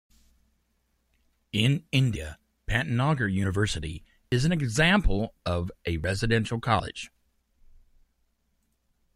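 At 2.16, 3.44, 4.32 (just before "an example of a"), 6.04 (just after "an example of a") and 6.8 s, the speech jumps ahead by a brief fragment, likely a dropped buffer (overrun). Each shows as a sharp waveform discontinuity and a thin vertical line on the spectrogram.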